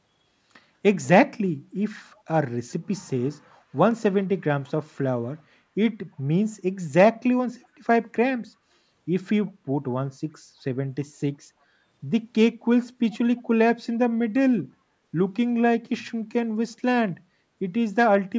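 From 9.46 to 9.52 s, a brief echo leak can be heard. A faint copy of the speech returns about 345 ms after the original. It is very quiet, roughly 35 dB below the speech, and lasts only a fraction of a second. It sounds like a ghost behind the talker. The likely cause is a far end on a loudspeaker, whose echo canceller let a scrap of the returned sound slip through. The speech carries nothing above 8 kHz.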